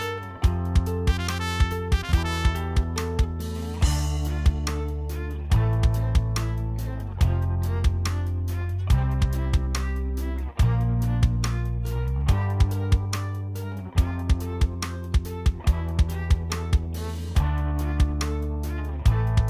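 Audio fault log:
No faults detected in the audio.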